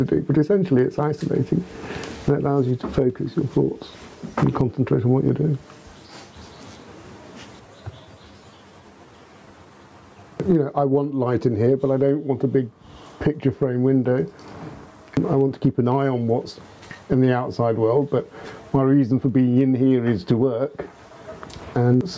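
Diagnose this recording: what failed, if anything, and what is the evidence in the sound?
Gain pumping runs throughout: the gain swings by roughly 20 dB, pulling down on each loud sound and leaving everything squashed. The likely cause is a microphone gain set far too high, forcing a fast limiter or compressor to clamp down repeatedly. A noise gate would cut the gaps toward silence, not lift the background.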